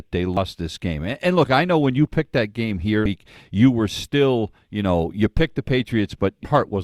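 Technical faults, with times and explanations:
0.37 s and 3.06 s: damaged data in a compressed stream. Each is a very brief blip, a few milliseconds long, cutting into the speech. At these points part of the compressed stream was corrupted, with bytes lost, zeroed or overwritten. The decoder misreads that stretch, loses its place in the frame structure and hunts for the next valid frame header. The misread data comes out as a brief glitch rather than the speech itself.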